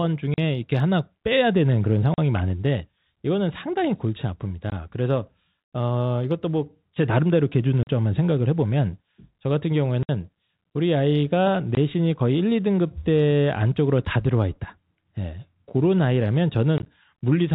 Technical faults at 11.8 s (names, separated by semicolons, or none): packet loss filled with silence